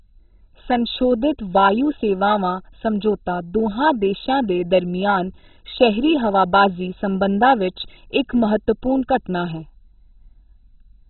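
Throughout, the speech sounds dull and muffled, with nothing above about 4.1 kHz, and carries a gurgling, granular roughness. That points to MP2 compression at a very low bitrate, likely near 16 kbps, which shuts off the upper sub-bands and coarsely quantises what remains.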